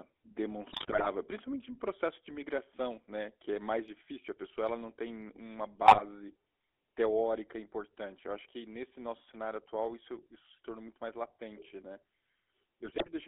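GSM full-rate codec damage runs through the whole of this speech clip, with the band held to about 300 Hz to 3.5 kHz and a buzzy, gravelly roughness, which fits a 13 kbps full-rate stream whose vocal-tract model is driven by sparse, regularly spaced excitation pulses. GSM bit errors break in at 0.70–1.07 s, just before "principalmente em processo de", at 5.86–6.03 s, right after "ela não tem uma", and at 12.84–13.09 s, where corrupted filter, pitch and gain values across successive frames turn the sound into squawks, pops and gargling bursts.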